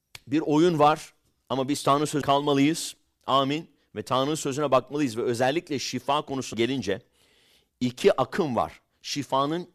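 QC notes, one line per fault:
2.21 s, compressed frames skipped: roughly a fifth of a second of speech vanishes, which fits about ten dropped 24 ms frames.
6.53 s, compressed frames skipped: a jump of about a tenth of a second, which fits about five 24 ms frames lost.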